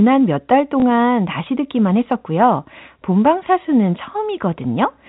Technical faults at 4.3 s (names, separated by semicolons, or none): none